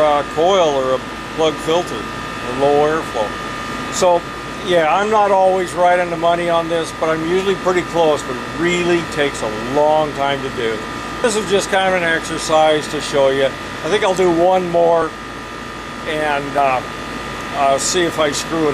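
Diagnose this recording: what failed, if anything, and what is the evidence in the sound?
Jumps ahead at 11.24, 15.02 and 16.58 s, each losing a short chunk. Likely a dropped buffer (overrun) at the driver, with samples overwritten unread.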